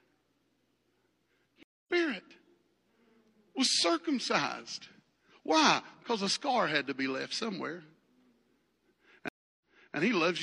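Stream reconnects at 1.63 s and 9.28 s break up this speech clip: the connection dropped, playback went silent (225 ms, then 316 ms) and a fresh decoder resumed mid-stream, first about 0.3 s ahead, then 372 ms back, repeating audio.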